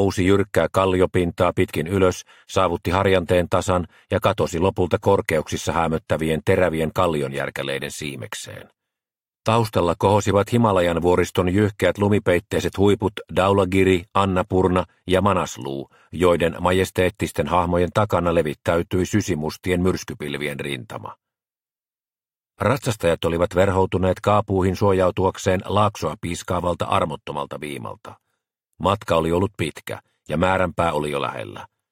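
No technical faults can be heard in this clip. Nothing in the audio, from its opening moment to its last, calls for comment.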